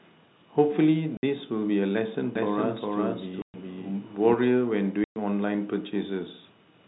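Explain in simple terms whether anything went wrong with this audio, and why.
The speech is cut by three short silences, a fault called packet loss filled with silence. The audio travelled in small chunks, some never arrived, and the receiver played nothing in their place. The gaps fall at 1.17 to 1.23 s (60 ms), 3.42 to 3.54 s and 5.04 to 5.16 s (120 ms each). Those lengths are all multiples of 30 ms, which fits 30 ms packets. Each hole starts and ends abruptly.

From 2.35 to 4.33 s the same speech is heard twice, a doubled audio track. A second copy, about as loud as the first, trails roughly 400 ms behind. It sounds dry and complete rather than like a room echo, and it switches on and off sharply at those two times. The likely cause is the sound being captured a second time through a slower path and mixed back in. The second gap at 3.42 s falls inside this doubled stretch. Throughout, the audio has the narrow, muffled range of a standard telephone line, which is expected for this kind of connection.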